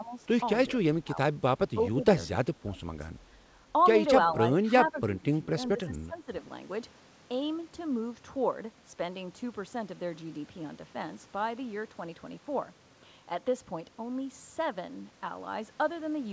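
At 0–0.13, 0.99–1.36, 1.74–2.01, 2.44–2.89, 4.55–4.67, 4.88–5.5 and 5.75–6.3 s the speech sinks by roughly 10 to 20 dB, likely speech suppressed in double talk as an echo canceller ducks both sides together. Unlike packet-loss gaps, these are partial dips rather than clean silences, heard over the G.722 path's 8 kHz ceiling.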